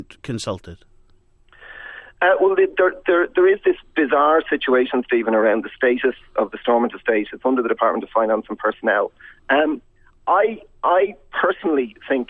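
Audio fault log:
No audible faults detected.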